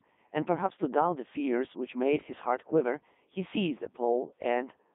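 Throughout, the speech passes through a Codec 2 vocoder at 3.2 kbit/s, resynthesised from pitch and envelope parameters within a 200 Hz to 3.6 kHz band, leaving it heavily robotic and buzzy.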